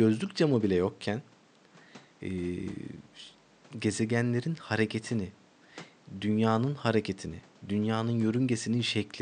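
A speech recording with nothing technically wrong in it, just some quiet background noise from the room sitting about 29 dB below the speech.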